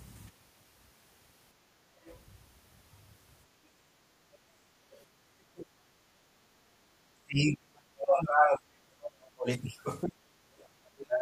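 A speech recording with echo canceller trouble throughout. The background is gated by the echo canceller at 1.62 to 1.81 s and 6.03 to 6.82 s. The room tone drops by about 12 dB while the far end plays, then comes back when the canceller releases. The other side's voice leaks through faintly at 2.05 to 2.17 s and 4.91 to 5.04 s. It sits roughly 30 to 35 dB below the talker. Leftover loudspeaker echo that the canceller failed to remove is the likely cause. Speech is suppressed in double talk at 5.22 to 5.75 s, 7.21 to 9.49 s, 10.04 to 10.38 s, and from 10.79 s to the end. The talker's level falls by roughly 35 to 40 dB in places. The canceller likely mistook the talker for echo while both sides spoke.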